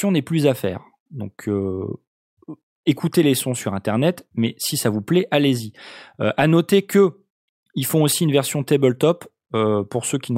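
Nothing stood out as a technical fault on listening to this speech recording.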